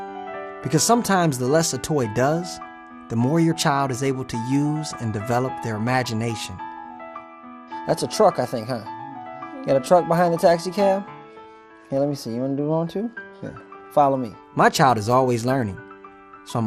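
Across the whole clip there's plainly audible MP2 compression: a dull top end with gurgling, grainy texture as upper sub-bands drop out, likely from an 80 kbps-ish encode.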